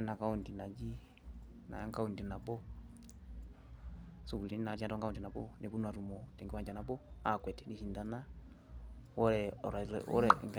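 From 4.18 to 7.70 s the speech suddenly rushes ahead, about 1.39 times faster, while its pitch stays unchanged. This is a time-stretched section, likely where software compressed the passage to fit a shorter length by dropping short slices.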